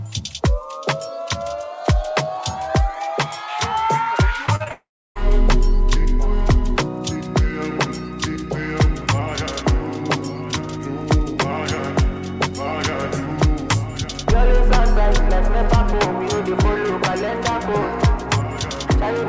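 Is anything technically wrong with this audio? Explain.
Yes. There are two linked faults, heard through a call path whose band stops at 8 kHz, which fits a G.722 wideband codec.

From 4.46 to 4.72 s there is repeated packet loss, giving a robotic sound. Four short holes occur, the longest 42 ms. Each is patched by extending the previous sound. About 38% of that stretch is concealed. The sound turns choppy.

From 4.72 to 5.17 s the audio cuts out entirely, likely from a long network dropout. About 0.44 s never arrives. The receiver first stretches the last sound into a fading buzz or hiss. Then roughly 0.31 s of silence follows before the audio resumes, with that part missing.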